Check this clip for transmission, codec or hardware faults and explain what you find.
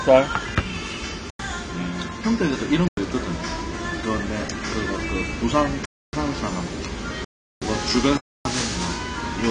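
Two faults are audible: codec damage across the whole recording, and five clean dropouts into digital silence.

Throughout, the sound is dull and smeared, with nothing above 10 kHz and a warbly, fizzy texture, likely from AAC compression at around 61 kbps. The encoder quantises coarsely and drops the top band, which a spectrogram shows as a flat ceiling at 10 kHz with patchy holes below it.

Blocks of digital silence start at 1.30, 2.88, 5.85, 7.25 and 8.17 s, lasting about 93, 93, 279, 372 and 279 ms. Output buffers likely went unfilled, which fits blocks of 4096 samples and multiples of that. The sound cuts out and back with no fade. On the waveform these are flat lines, and on a spectrogram they are dark vertical bands.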